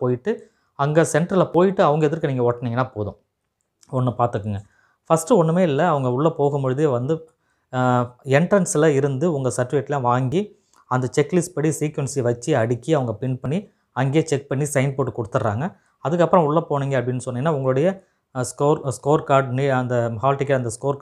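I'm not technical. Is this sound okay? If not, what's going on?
No. Three times, at 1.54, 10.32 and 13.46 seconds, the recording skips ahead, likely a dropped buffer (overrun): the computer fell behind, losing brief snippets, the later two longer.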